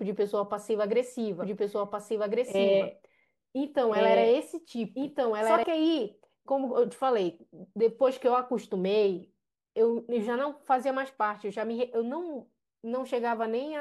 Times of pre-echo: none

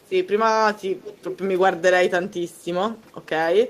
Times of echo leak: 1.02-1.38, 3.25-3.29

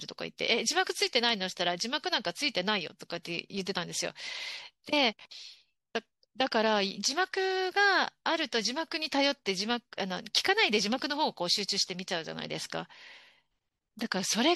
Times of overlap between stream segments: none

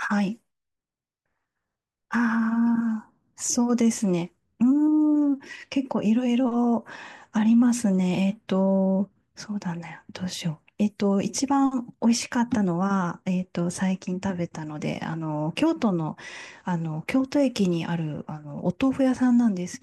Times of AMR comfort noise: none

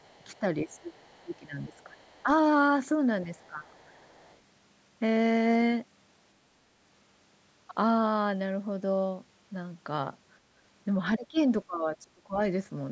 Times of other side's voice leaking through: 0.00-0.39, 0.86-1.36, 1.73-2.23, 3.37-4.39, 11.37-11.41

